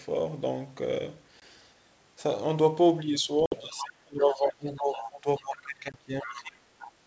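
At 1.40 to 1.43 s, packet loss on an ADPCM call leaves a hard-edged 20 ms gap, consistent with a single lost packet. When the sound resumes, the decoder's adaptive predictor and step size no longer match the sender's, so the speech returns slightly distorted before it settles. A longer 60 ms hole at 3.46 to 3.55 s, about three packets' worth, has the same abrupt edges and the same unsteady recovery.

From 3.68 to 6.68 s the talker's speech is pulled down in level, at its deepest by roughly 25 dB, and thins or breaks into pieces. This is speech suppressed in double talk, likely an echo canceller failing to separate the near talker from loudspeaker echo and attenuating both.

Inside that stretch the other side's voice leaks through, at 3.74 to 3.86 s, 4.22 to 4.47 s, 4.76 to 5.10 s and 5.37 to 5.44 s. It sits roughly 10 to 30 dB below the talker, likely residual loudspeaker echo the canceller did not remove.

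Another 20 ms loss at 5.92 to 5.95 s produces the same hard gap and distorted recovery.

Further leakage of the other side's voice follows at 6.21 to 6.43 s and 6.79 to 6.92 s, about 15 to 20 dB down.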